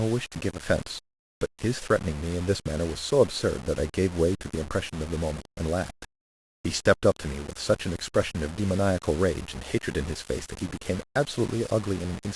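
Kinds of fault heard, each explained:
Low bit depth without dither, throughout: the speech carries a grainy, buzzing distortion that rises and falls with the voice, sitting only about 15 dB below it, so quiet syllables turn rough and the softest tails sputter or drop to silence. The likely cause is samples rounded to very few levels with no dither, which fits roughly 6 bits, leaving an error that tracks the signal instead of a steady hiss.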